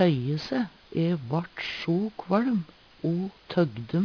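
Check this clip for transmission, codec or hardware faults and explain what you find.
Aliasing runs through the whole clip. The sound was resampled down, which fits a new rate near 11 kHz, without an anti-alias filter, so content above 5.5 kHz folds back as unrelated tones, roughly 25 dB below the signal, giving gritty, metallic highs. A plain low-pass would only sound dull, with no stray pitches.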